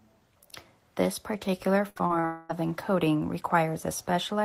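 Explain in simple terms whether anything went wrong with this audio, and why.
From 1.89 to 2.25 s, small chunks of the speech got lost in transit four times, the longest about 63 ms. The receiver patched each hole by stretching the previous sound, covering about 39% of that stretch. This is repeated packet loss, and it makes the speech choppy and robotic.

Right after, from 2.25 to 2.51 s, about a quarter of a second of speech is missing, likely a long network dropout. The gap is filled with a smeared continuation of the last sound rather than silence, and the lost speech never comes back.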